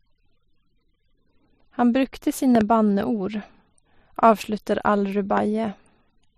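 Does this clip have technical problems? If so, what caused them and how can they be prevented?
Yes. Loud pops occur: a double pop at 2.55 to 2.63 s and a single one at 5.37 to 5.40 s, far above the speech. Each is likely a voltage spike from a plug, switch or static. Secure cables and ground equipment to prevent this.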